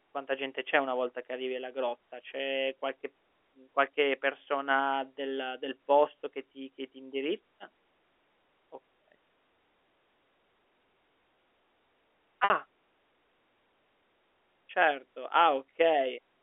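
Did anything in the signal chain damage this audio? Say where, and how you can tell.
Yes: packet loss with pitch repetition, from 12.44 to 12.50 s, at the network stage. About 60 ms of speech is missing, which fits three 20 ms packets. The receiver filled the gap by looping the last pitch period, so the speech briefly holds with a buzzy, fading sustain before resuming.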